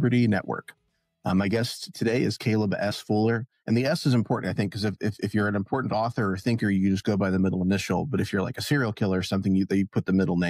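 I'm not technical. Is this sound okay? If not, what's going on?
No. Compressed frames skipped twice, at 2.90 to 2.92 s and at 5.92 s. Each time a tiny slice of sound vanishes, so it jumps forward with a brief smeared blip.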